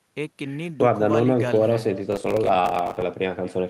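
Echo with no canceller runs through the whole of this speech recording. Each phrase returns roughly a fifth of a second later as a quieter, thinner copy about 19 dB down, because the far end's loudspeaker feeds its microphone and nothing subtracts it. Processor overload crackle appears from 2.12 to 3.02 s: a gritty tearing in which dozens of buffers, which fits blocks of around 10 ms, missed their deadlines and were filled with stale audio, leaving hard-edged fragments until the load eased. Beneath both, the call's codec path adds its usual coding noise and a top end that stops near 12 kHz.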